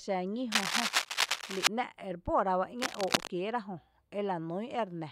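Dense, ragged scratching and rustling sits over the speech from 0.52 to 1.67 s, somewhat louder than the speech itself, and returns from 2.78 to 3.30 s at about the same level as the speech. This cable scratch noise likely comes from a worn cable or connector being moved, its contact resistance flickering.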